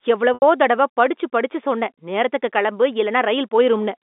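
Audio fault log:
0.34–0.42 s, packet loss with pitch repetition: a brief buzzy, held tone fades toward silence before the speech resumes through the telephone band. The receiver looped the last pitch period to cover 80 ms of missing audio, which fits four 20 ms packets.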